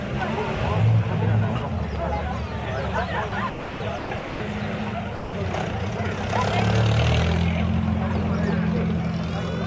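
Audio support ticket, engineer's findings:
Sender-side voice detector likely misjudging low-level content as background and halting transmission; receiver fills gaps with comfort noise. Sound cuts to steady hiss at 3.29–3.32 s, 3.50–3.80 s, 3.98–4.10 s, 4.19–4.40 s, 5.15–5.33 s, returning on retrigger. Band tops out at 8 kHz, consistent with G.722 at 64 kbps.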